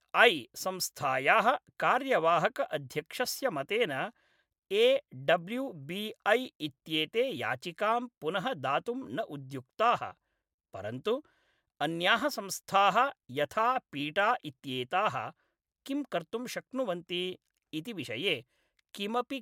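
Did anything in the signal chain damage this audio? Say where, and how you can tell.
No, nothing in this speech recording points to damage at any stage of the chain.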